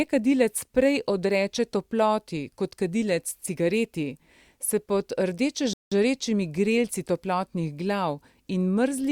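At 5.73 s the speech stops dead and stays silent until 5.92 s, a rebuffering stall lasting about 0.18 s. The player exhausted its downloaded audio and had to wait for more data before continuing. When playback returns, it picks up at exactly the point where it halted, so nothing is skipped or repeated. The result is a clean gap of silence that adds time to the speech without removing any of it.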